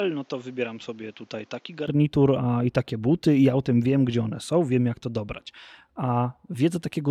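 A speech recording whose first 1.88 seconds sound duller and noticeably quieter than the rest, roughly 10 dB down, with nothing above 7.6 kHz and faint background noise sitting well below the voice. At 1.88 s, with no gap, the sound abruptly opens up and gets louder just before "a i takie buty". That pattern points to an input switched to a poorer device, likely a narrower-band microphone that was active until the system changed over to the better one.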